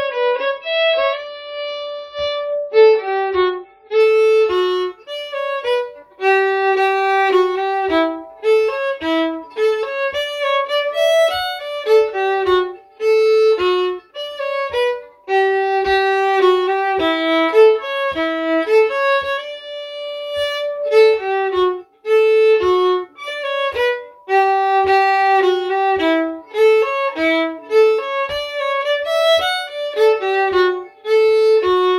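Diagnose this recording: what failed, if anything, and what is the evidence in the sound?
The fault is at the network and playback stage: an adaptive stream starting at a low bitrate. From 0 to 4.0 s the sound has nothing above about 5.9 kHz and carries heavier codec artefacts, which fits an MP3 rendition of roughly 24 kbit/s. At 4.0 s the full treble returns abruptly with no gap, consistent with a step up to about 128 kbit/s. The player began on the cheap rendition for a fast start, then switched once it had measured the connection.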